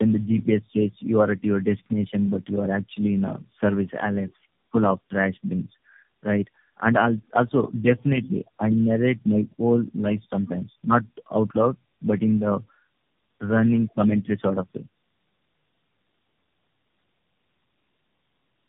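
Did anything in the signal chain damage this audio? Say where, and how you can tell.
Yes, at the codec stage: tandem speech coding runs through the whole clip. The speech is rough, muffled and warbly, with nothing above 3.7 kHz. It sounds like three low-rate narrowband coders in a row, each re-encoding the previous one's already degraded output.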